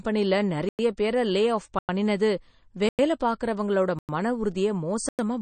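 Throughout the speech, a watery, swirling texture and nothing above 9 kHz, with a flat ceiling on the spectrogram, point to MP3 compression, likely at a low bitrate around 32 kbps. Gaps between chunks then cut 100 ms silent holes at 0.69, 1.79, 2.89, 3.99 and 5.09 s. The speech resumes with "பேரை லே" after the first and "பார்க்கறவங்களோட மன" after the third. Each is a hard-edged flat line in the waveform, every 1.1 s.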